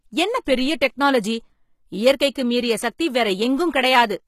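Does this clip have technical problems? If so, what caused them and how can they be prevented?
Yes. HE-AAC compression damage runs through the whole clip and is plainly audible. Nothing remains above 14.9 kHz. The treble sounds bright but not genuine, and s sounds turn gritty. The likely cause is spectral band replication: copied lower bands replace the real treble, and their harmonics don't line up. That fits a low bitrate around 20 kbps. To prevent it, encode at a higher bitrate or with plain AAC.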